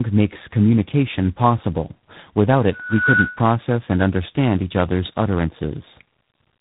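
Throughout, the call passes through two low-rate speech coders in a row, which fits an 8 kbit/s G.729A stage followed by a 24 kbit/s G.726 stage. This tandem speech coding compounds their losses, so the speech sounds rough, muffled and warbly, with nothing above 3.8 kHz.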